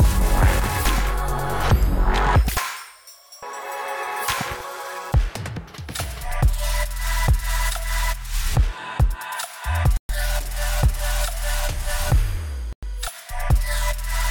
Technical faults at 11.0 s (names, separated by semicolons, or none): none